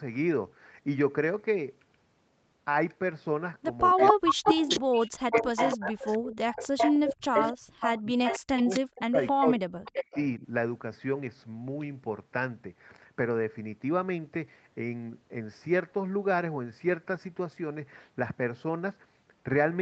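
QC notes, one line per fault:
3.94–4.81 s, 5.27–7.69 s and 8.02–10.44 s, speech suppressed in double talk: the voice ducks by as much as about 40 dB, losing roughly half a second, then two seconds, then one and a half seconds in pieces. This is likely an echo canceller that could not tell its own talker from loudspeaker echo while both sides spoke, so it turned everything down. Unlike packet loss, the dips follow the overlap rather than falling at random.
3.98–9.32 s and 9.85–10.19 s, echo leak: a copy of the voice trails about 0.27 s behind, roughly as loud as the speech in the long stretch and about 5 dB quieter in the short one. This is likely a loudspeaker's echo getting past the canceller and being sent back. The fixed lag sets it apart from room reverb, which smears the sound rather than repeating it as a distinct delayed copy.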